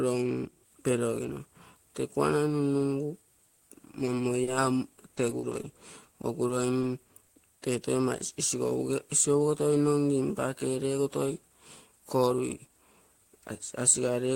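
Choppy sound begins just after "kuanai nunnugu", from 3.55 to 4.49 s, returning from 4.95 to 5.65 s and 6.21 to 7.29 s. This is repeated packet loss: brief holes of up to 40 ms, each filled by extending the preceding sound.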